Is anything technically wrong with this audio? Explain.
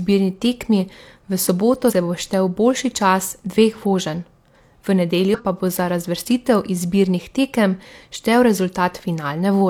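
Yes. This speech has compressed frames skipped twice: at 1.86–1.93 s, just before "bo štel boljši čas", and at 5.30–5.40 s, before "pa bo za razvrstitev". Each time roughly a tenth of a second of coded audio never plays. The decoder jumps straight past frames that were missing or damaged, and the audio jumps ahead at the join. The waveform shows a brief discontinuity, and the spectrogram shows a thin vertical seam where harmonics jump.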